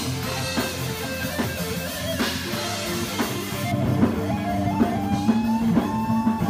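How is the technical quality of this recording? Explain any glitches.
The recording has one clear fault. From 3.72 s to the end, de-emphasis has been applied wrongly: a treble-cut curve meant to reverse pre-emphasis was applied to sound that didn't need it. The top end tilts smoothly downward, reaching about 11 dB down at 10 kHz relative to 1 kHz, so the audio turns dull and muffled. Unlike a low-pass filter, there is no abrupt cutoff, just a gradual slope that dims everything above the midrange.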